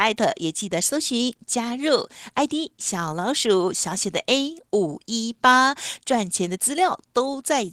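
No technical faults can be heard anywhere in this speech recording.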